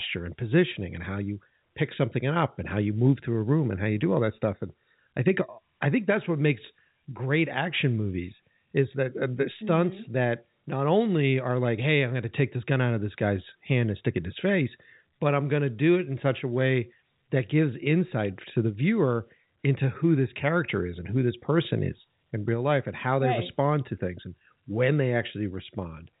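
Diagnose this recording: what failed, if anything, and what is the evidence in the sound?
Nothing in the chain failed: the speech comes through a G.711 A-law telephone path with nothing above 4 kHz, as that format requires, and at most a faint level-following hiss from its 8-bit logarithmic coding.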